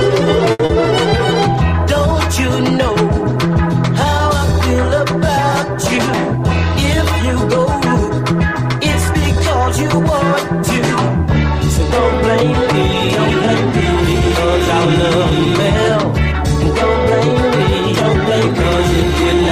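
At 0.51 s a packet arrived late and the jitter buffer ran dry, producing a short stall from a late packet. Rather than skip ahead, the receiver held on to the last sound it had, stretching it by 80 ms until the packet turned up at 0.61 s, then resumed exactly where it left off. Nothing is lost, but that moment is drawn out, with a faint buzz or dip where the sound should have moved on, and the playout delay grows by 80 ms.

Just after, from 0.65 to 0.71 s, comes a short concealed packet loss. This time 40 ms of audio never reached the decoder at all, so the receiver invented a replacement by extending the preceding sound, following its pitch where there was one and using shaped noise where there wasn't, then cross-faded back into the real signal. The result is a brief smear or wobble, and whatever fell inside those 40 ms is gone.

From 7.35 to 8.62 s there is a jitter buffer speed-up. The buffer had built up more audio than its target, so the receiver trimmed it back by repeatedly cutting out short slices a pitch period or so long, removing roughly a twentieth of a second in total. 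Playback runs at about 103% speed while the pitch stays put.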